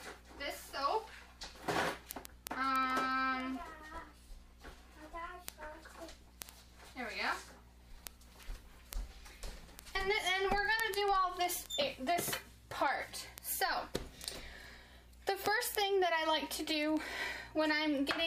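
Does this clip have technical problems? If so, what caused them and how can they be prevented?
Yes. Word clock ticks run from 0.10 s to the end of the clip: sharp clicks of uneven strength, repeating about every 70 ms. The receiving device runs on its own clock, a few hundred parts per million off the sender's, and drops or repeats a single sample each time the two slip past each other. To prevent this, lock the receiver to the incoming digital stream or to a shared master word clock.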